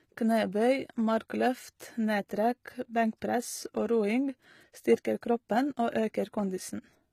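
Throughout the speech, the audio has likely been squeezed by HE-AAC compression at a bitrate that sounds close to 20 kbps. Only the lower spectrum is truly coded and the treble is rebuilt from copied bands, so s sounds turn plainly gritty and metallic.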